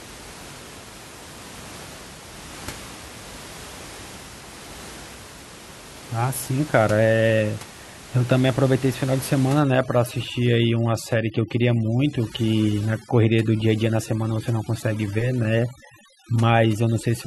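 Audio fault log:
9.60 to 17.27 s, overdone noise removal: a noise reduction stage set too strong starts acting here and runs to the end of the clip, pulling individual frequency bands down hard or shutting them off whenever they sit close to its noise estimate. The room noise, which lies about 18 dB below the speech, drops and breaks up into twinkling specks, and the quieter parts of the speech are cut away with it.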